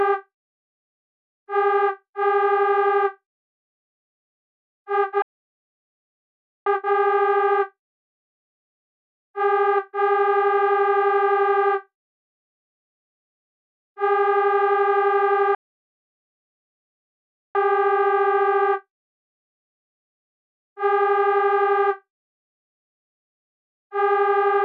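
At 5.22 s the audio cuts to silence for 1.44 s, a playback stall, likely the player running out of data or its thread being blocked. From 6.66 to 9.66 s it sounds hurried at unchanged pitch. This is time-compressed catch-up at about 1.15 times speed, as the player trims small cross-faded pieces from its backlog. A second playback stall silences the audio from 15.55 to 17.55 s, a full 2.0 s gap. Between 17.55 and 20.55 s a faster catch-up follows, at about 1.25 times speed, with the same rushed quality.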